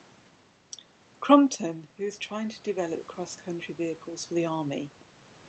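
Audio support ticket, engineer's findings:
Automatic gain rising, 1.96–4.99 s. Input level drops about 13 dB after the talker moves back near 1.5 s; AGC then ramps gain up about 8 dB over three seconds. Waveform: envelope and noise floor swell together. Spectrogram: background band brightens alongside the voice.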